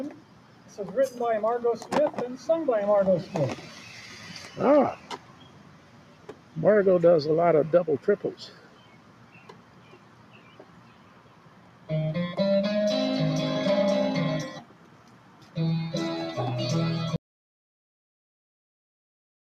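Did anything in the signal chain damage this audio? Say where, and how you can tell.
Yes. Call processing: a noise suppressor applied to music or sounds stays active throughout, treating held tones and tails as noise, so level swings by about 10 dB and pumps.

The noise suppressor cut sound at 0.1–0.78, 3.56–4.58, 4.96–6.57, 8.41–11.9 and 14.55–15.57 s, with drops of about 7 to 9 dB while attacks survive.

An audio dropout to silence runs from 17.16 s to the end: silence with no room tone, likely a lost input while recording continued.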